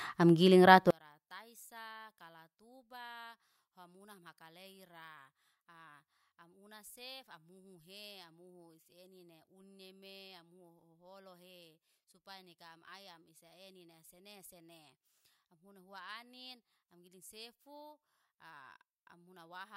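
A speech recording that collapses from about 0.91 s to the end: the voice drops by about 35 dB and becomes a faint trace. The likely cause is one channel inverted. One side of the stereo pair has reversed polarity, so when the two channels are summed to mono, the centred voice they share cancels out, leaving only the small differences between left and right.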